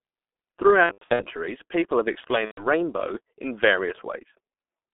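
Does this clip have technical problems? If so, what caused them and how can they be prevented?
Yes. The whole clip runs through the G.723.1 codec at about 6.3 kbit/s. The line passes only about 250 Hz to 3.5 kHz, so the speech is muffled and thin. The codec sends a coarse model of the voice every 30 ms and updates it slowly. That leaves a hoarse, rough texture, and consonants smear into each other. The damage is heavy throughout. A wideband codec at a higher bitrate would prevent it.

There is also VoIP packet loss concealed by the speech codec. It happens twice. From 0.83 to 1.26 s, just before "people have", losses are scattered over about 360 ms and total about 270 ms. That fits roughly nine lost 30 ms frames, with the longest gap about 90 ms. From 2.45 to 2.67 s, just after "people have", about 120 ms is lost, which fits four frames. Each time the decoder stretches the last sound into a buzzy tone or a coloured noise that fades, and the speech stays weak while it recovers. 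A more stable network with forward error correction or a larger jitter buffer would prevent it.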